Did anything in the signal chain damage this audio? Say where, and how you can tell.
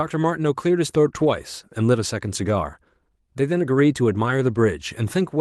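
Yes. At 1.21 s the network stage dropped a packet, and it was rebuilt from error correction. There is no gap, but a brief stretch sounds rougher and noisier, which fits a single 20 ms Opus frame played back from the low-bitrate redundant copy carried in the following packet.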